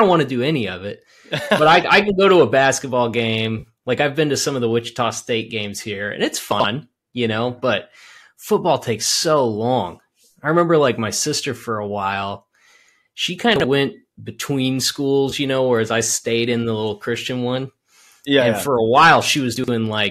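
Speech carried over what is likely a low-delay AAC link, with faint graininess from that coding. AAC frame loss with concealment appears at 3.59 to 3.67 s, after "go to a basketball", and again at 15.30 to 15.33 s, after "went between". The decoder papered over about 50 ms and 20 ms of missing data with a smeared, noisy patch rather than a gap, which fits short runs of lost frames. Chunks out of order sound different: the audio is not smeared but briefly jumbled, with hard joins. This happens at 6.52 to 6.64 s (after "games here and it's"), 13.56 to 13.64 s, and 19.56 to 19.68 s, where a 40 ms block plays one or two blocks late.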